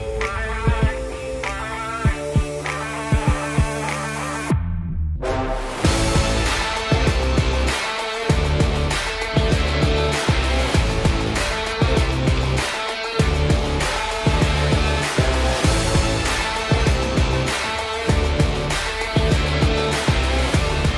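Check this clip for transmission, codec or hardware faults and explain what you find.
Nothing in the clip points to a transmission, codec or hardware fault. No faults can be heard anywhere in the audio.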